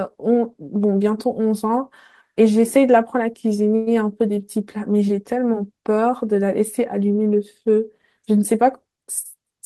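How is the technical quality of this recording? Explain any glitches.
Two glitches stand out in the speech, both typical of audio sent over a network call.

From 3.75 to 3.89 s there is a call audio freeze. The last sound hangs on as a brief fading buzz for about 112 ms, then the speech carries on from where it stopped with nothing lost. The likely cause is delayed packets draining the jitter buffer, so the receiver stretched the final sound until the audio arrived. That inserted gap adds 112 ms of delay.

From 9.08 to 9.60 s comes a jitter buffer speed-up. The speech sounds slightly rushed, running at 106% speed while the pitch stays the same. The receiver had more audio buffered than it wanted and trimmed out short pitch-period slices, roughly 40 ms in total, to catch up.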